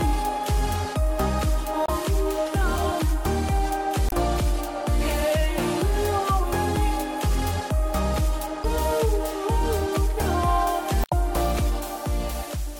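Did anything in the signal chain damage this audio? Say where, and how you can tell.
Yes. The codec stage shows damaged data in the compressed stream. Four brief glitches break the sound at 1.84–1.90, 4.07–4.13, 8.61–8.65 and 11.01–11.13 s. Corrupt bytes made the decoder misread frames there, lose sync and hunt for the next valid frame header.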